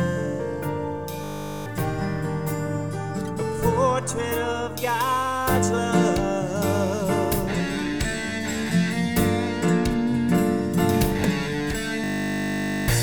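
At 1.24 s, and again at 12.04 s, a system hang loop takes over. Playback stalls while the output keeps replaying the same 20 ms slice of buffered audio, giving a steady 50 Hz buzz instead of a stutter. The first loop runs to 1.66 s, roughly 21 repeats, with a bit under half a second of audio lost. The second runs to 12.88 s, about 42 repeats, and drops around a second.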